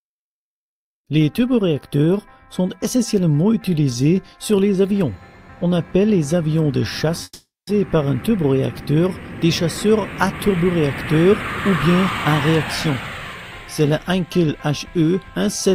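At 7.23 s the sound cuts out for almost half a second, until 7.69 s, likely a long network dropout. The last sound carries on as a fading buzz, then roughly 0.23 s of near-silence, and it resumes with about 0.44 s simply gone.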